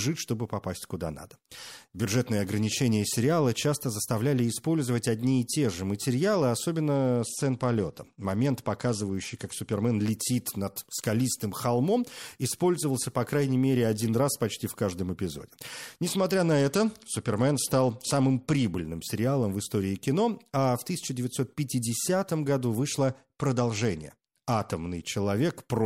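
A congested Bluetooth link caused a Bluetooth SBC bit pool drop from 6.94 to 9.95 s (after "и те же материалы", before "летит над скалистым холмом"), 16.18 to 18.65 s (before "сериалом в истории кино") and 23.06 to 25.02 s. With bits withdrawn, the treble dulls and gritty noise rises, which fits a fall from a bit pool near 31 to about 12.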